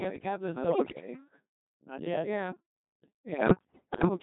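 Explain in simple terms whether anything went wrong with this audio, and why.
Yes. The whole clip passed through a Codec 2 vocoder, which sends only a rough description of the voice and rebuilds it from tones at the other end. That is why the speech sounds robotic and buzzy from start to finish.

There are also bit errors on digital voice radio, from 0.64 to 1.08 s (just after "the catalyst") and again from 3.30 to 4.08 s. Corrupted data scrambles the pitch, loudness and tone of each short chunk, so the voice breaks into warbles and bleeping gibberish.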